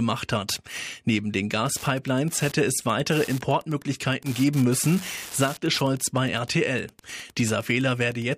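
Speech recording with Wi-Fi interference from 1.53 s to the end: ticks every 102.4 ms, about ten a second, roughly 20 dB below the speech, as the audio circuit rectifies a nearby radio's beacons. A spectrogram shows evenly spaced thin vertical stripes; the waveform shows regular small spikes.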